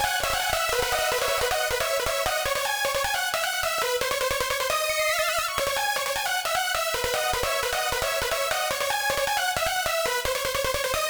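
From the first moment until 1.48 s, a second, quieter copy of the audio trails the original by roughly half a second. It sits about 5 dB down, has the same full bandwidth, and carries no reverberant tail or room colouring. At 1.48 s it cuts off abruptly. This doubled audio track is likely the same signal being mixed in twice, with one copy arriving late through a slower capture path or a misaligned edit.

Four times after that, the sound makes a small forward jump with no gap of silence: at 2.00 s, 3.79 s, 5.60 s and 9.15 s. The first skip is the largest, around 40 ms, the last around 20 ms, and the middle two about 10 ms each. These are likely dropped buffers from overruns, where the program fell behind, the hardware overwrote samples before they were read, and the audio on either side was spliced straight together.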